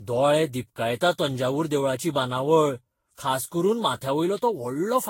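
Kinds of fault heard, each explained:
Generation loss: The speech was likely decoded and re-encoded around ten times with a lossy codec near 60 kbit/s, each pass adding fresh quantisation noise on a shifted frame grid. The result sounds swirly, smeared and hollow, with blurred consonant attacks and nothing above 16.6 kHz.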